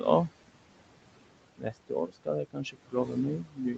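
Noise suppressor artifacts run through the whole clip: the suppressor pulls bands it judges to be steady room noise down by about 21 dB frame by frame. The background dips between phrases and swells back under speech.

Speech cut by the noise suppressor begins at 1.58 s and lasts to the end. There the suppressor mistakes part of the speech for noise and attenuates it by as much as about 22 dB, so softer consonants and word endings sound swallowed or faint.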